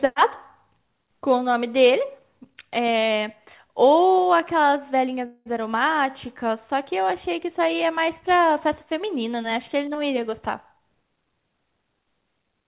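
At 5.26 s the speech stops advancing and the last sound is stretched into a buzzy, fading hiss for about 195 ms, with roughly 10 ms of near-silence before the speech resumes at 5.48 s. This is likely a call audio freeze: packets stalled and the jitter buffer ran dry. Unlike a dropout, nothing is skipped. The speech picks up exactly where it paused, so everything after it lands about 0.2 s later. The audio also carries the narrowband call-path limit of nothing above 4 kHz, which fits a 64 kbps G.711 mu-law link.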